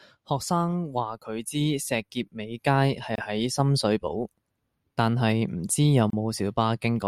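At 3.16 s, just before "喺深水埗", and again at 6.10 s, there's a gap at a join of encoded pieces: separately encoded chunks were spliced untrimmed, leaving about 25 ms and 30 ms dropouts with smeared edges.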